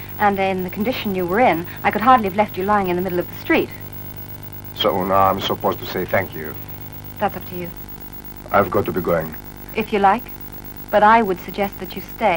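From start to end, a filter restarted on every block resets its state and begins each block from silence. Each restart leaves a small transient, giving a steady buzz at 23.4 Hz that rises and falls with the sound's level, which fits a 2048-sample block.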